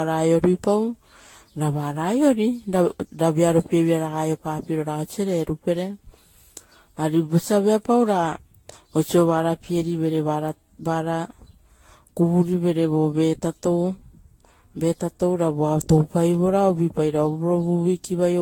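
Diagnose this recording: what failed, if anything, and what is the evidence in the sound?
Codec stage: the speech sounds swirly, hollow and smeared throughout, with blurred attacks, and a spectrogram shows speckled noise, spectral holes and nothing above 19.2 kHz. This is likely generation loss, fitting about ten Vorbis passes near 65 to 70 kbit/s, each requantising on a shifted frame grid.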